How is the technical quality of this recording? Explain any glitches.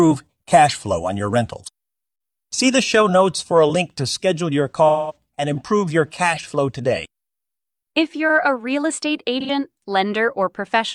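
Two brief glitches interrupt the speech, both AAC frame loss with concealment. At 4.88 s, a patch lasting about 0.28 s turns smeared and phasey. At 9.41 s, a shorter 0.1 s patch does the same. The decoder lost data and filled the gaps from the last good spectrum. The first gap fits about five missing frames, the second about two.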